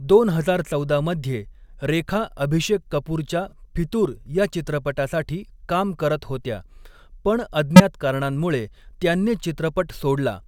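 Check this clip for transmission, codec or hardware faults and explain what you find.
Two codec-level faults are present, both from damaged compressed frames, and they are handled in different ways.

From 3.49 to 3.53 s there is a corrupt frame concealed. Flipped bits left one AAC frame undecodable, and the decoder detected this and substituted its own fill, either silence or a sign-scrambled repeat of the preceding spectrum. The concealed stretch lasts about 36 ms, which fits a single frame.

From 7.76 to 7.80 s there is a corrupt frame decoded. Here the bit errors went unnoticed, so the decoder rendered the damaged data as if it were valid. Misread gains and codewords scattered energy into the wrong frequency bands for roughly two frames. It comes through as a sharp chirp or noisy burst laid over the speech, about 46 ms long.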